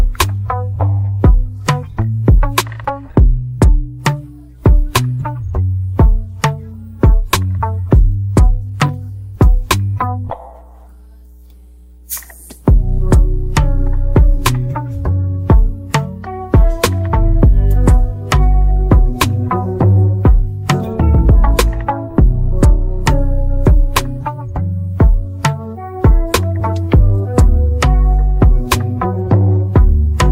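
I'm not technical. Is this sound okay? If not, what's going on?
No. From the very start until about 21.2 s there is mains hum: a steady, low, even tone sitting under the sound, quiet but clearly there, which then stops. It comes from the electricity supply leaking into the recording, likely through a grounding problem or nearby power equipment, and here it sits at 60 Hz. Unlike rumble from wind or handling, which wobbles and shifts, this hum holds one fixed pitch the whole time.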